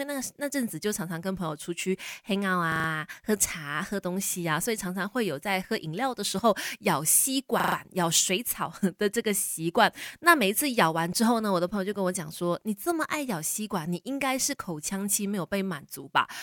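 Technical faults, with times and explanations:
2.72 to 2.88 s and 7.60 to 7.76 s, repeated buffer: at each point the same 40 ms slice of speech plays four extra times, giving a rapid, machine-like stutter with a hard join at every repeat. That fits the playback device reusing its last buffer while waiting for fresh audio. Unlike a dropout, there is no silence, and the speech resumes with essentially nothing missing. Unlike a codec glitch, the repeats are identical copies at a steady rate.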